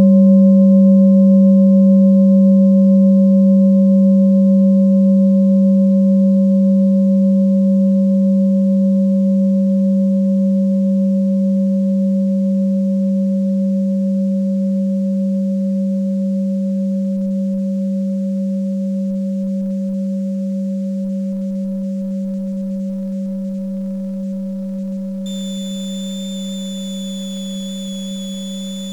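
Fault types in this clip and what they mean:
Switching supply whistle: from 25.26 s to the end at 28.92 s, a thin high tone wanders between about 3.40 and 3.57 kHz, roughly 20 dB below the audio. A switching power supply is cycling at an audible rate, and its frequency shifts with load.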